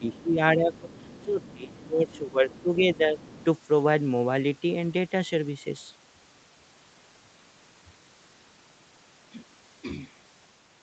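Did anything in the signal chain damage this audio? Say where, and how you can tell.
Yes. Speech suppressed in double talk, 0 to 3.33 s: the talker dips by up to about 15 dB, likely because the call's echo canceller turned down both overlapping voices.

Other side's voice leaking through at 0.02–0.3, 0.75–1.25, 1.45–1.73, 2.08–2.19, 2.49–2.62 and 3.19–3.45 s. These faint scraps sit about 25 dB below the talker and are likely loudspeaker echo the canceller left behind.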